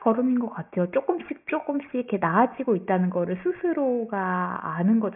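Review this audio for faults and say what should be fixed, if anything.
Aliasing throughout the speech: sibilant energy above 3 kHz folds back as gritty, unrelated tones about 25 dB down, which fits resampling to 6 kHz unfiltered. Unlike plain band-limiting, it adds harshness rather than dullness. To prevent it, apply an anti-aliasing low-pass filter below the new half-rate before downsampling.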